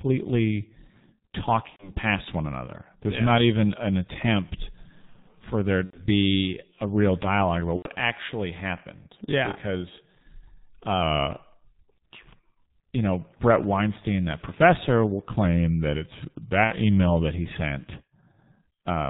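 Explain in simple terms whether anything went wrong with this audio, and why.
Several things went wrong.

The whole recording went through the G.723.1 codec, an old internet-phone format that squeezes speech very hard. It keeps nothing above 4 kHz, so the speech sounds muffled. It works in 30 ms chunks and updates its picture of the voice slowly. Here the damage is heavy. The voice is hoarse and the consonants are smeared together.

There are four gaps from VoIP packet loss concealed by the speech codec. When pieces of the call went missing, the decoder guessed at them by stretching out the last sound it had. That fills the hole with a fading buzz or noise. The first is at 1.70 to 1.91 s, just before "past one another". The second is at 5.85 to 6.03 s, right after "for there". The third is at 7.76 to 7.88 s, between "a real dialogue about" and "actually happened". Each of these three covers about 90 ms of lost sound. 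The fourth is shorter, about 60 ms, at 16.64 to 16.72 s. The voice stays weak for a moment after each gap.

From 15.45 to 17.34 s, the speech slows by about 6 percent. Its pitch also drops by about a semitone. The likely cause is a drift correction step, where software keeping two clocks in line briefly changed the playback speed.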